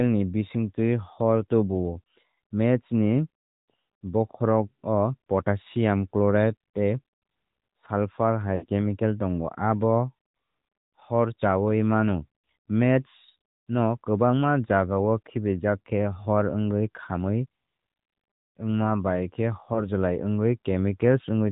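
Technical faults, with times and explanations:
Throughout: AMR narrowband mobile codec. Nothing above 4 kHz survives. The voice has a plainly buzzy, synthetic edge because each 20 ms frame is rebuilt from a vocal tract model and a few excitation pulses, and the damage fits a bitrate around 10.2 kbps.
8.56–8.66 s: lost AMR speech frames. About 60 ms fails just before "chemical tongo". The decoder repeats the last good pitch and vocal tract settings at falling gain, so the sound smears and sags before the speech resumes weak or rough.
19.74–19.81 s: lost AMR speech frames. A single 20 ms frame is missing. Concealment reuses the previous frame's parameters at reduced level, which gives a brief dip or warble rather than a gap.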